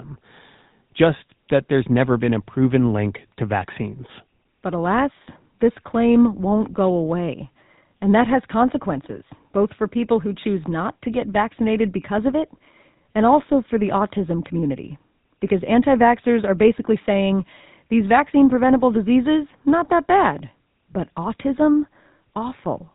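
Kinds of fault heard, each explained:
GSM full-rate codec: the speech has passed through the original GSM mobile codec. It rebuilds the voice from a vocal-tract model excited by sparse, regularly spaced pulses. Nothing survives above about 3.8 kHz, and a plainly audible buzzy, gravelly roughness runs through the whole clip, consistent with the 13 kbps full-rate mode.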